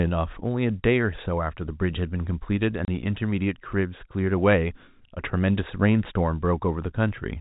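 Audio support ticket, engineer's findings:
Packet loss filled with silence, 2.85–2.88 s: a 30 ms dropout with hard edges, which fits one lost packet. The receiver plays silence instead of concealing it. G.711 telephone band sits underneath, capped at 4 kHz.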